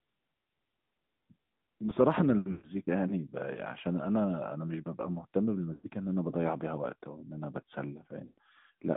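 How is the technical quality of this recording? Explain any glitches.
The recording has plainly audible narrowband mobile-phone coding throughout and three brief dropouts.

Throughout, the sound is thin and boxed-in, with a buzzy, synthetic edge and nothing below about 150 Hz or above 3.7 kHz. This is the AMR narrowband mobile codec. It samples at 8 kHz and rebuilds the speech from a vocal-tract model excited by a few pulses per subframe, so the upper band is gone and the timbre turns artificial. The damage is consistent with a mid-rate mode around 10 kbps.

At 2.52 to 2.71 s, 5.74 to 5.89 s and 8.26 to 8.38 s, the speech briefly smears into a drawn-out, warbling tone that fades away before the voice returns, weak and rough. These are lost AMR speech frames. Each gap runs about 100 to 120 ms, which points to five or six consecutive 20 ms frames failing. The decoder repeats its last good pitch and vocal-tract settings while lowering the gain, which produces the stretched, dying sound in place of a hard cut.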